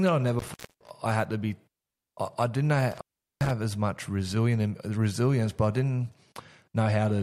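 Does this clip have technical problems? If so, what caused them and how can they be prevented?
Yes. Intermittent contact breaks the speech twice: from 0.39 to 0.91 s, just after "that I never", with the line open for about 0.27 s, and from 2.91 to 3.51 s, after "I I didn't", open for about 0.4 s. Each time a loose cable or plug briefly loses connection, so the sound drops out with crackle at the edges and comes back before "I had to be" and "as much". Seating connectors firmly and replacing worn cables prevents it.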